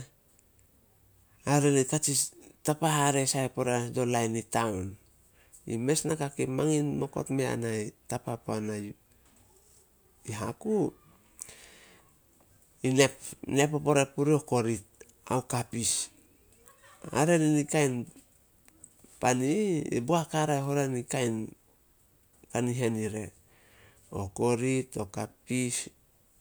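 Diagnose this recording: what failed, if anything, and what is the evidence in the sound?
Nothing in this speech recording points to a failure at any stage of the chain. There is no audible evidence in the sound that calls for a diagnosis.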